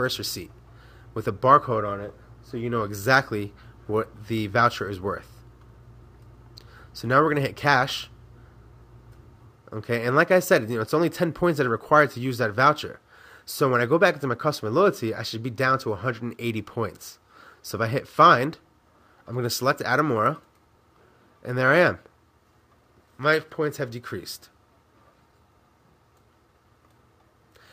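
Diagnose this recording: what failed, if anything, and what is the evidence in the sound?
Nothing failed here as far as the ear can tell, so there's no stage to point at and no evidence of a fault to chase.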